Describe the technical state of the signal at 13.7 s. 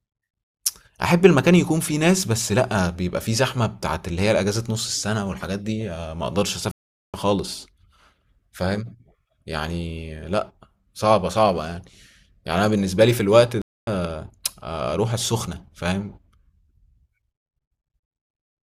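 At 13.7 s the speech is cut by a stream reconnect, from 13.62 to 13.89 s. The connection dropped and the player restarted its decoder mid-stream. About 255 ms of silence follows. The speech resumes roughly 0.3 s further along, skipping content.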